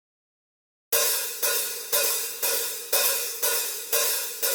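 No technical faults are audible anywhere in the audio.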